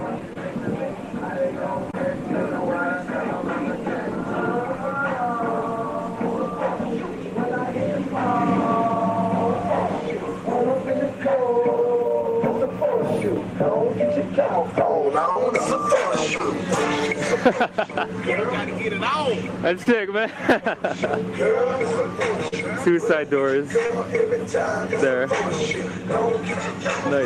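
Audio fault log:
0.33, 1.91, 15.32, 16.38, 19.83, 22.48 and 23.86 s: short concealed packet loss. About 20 to 40 ms went missing each time, and the decoder bridged it by extending the previous sound, so you get a quick smear or wobble.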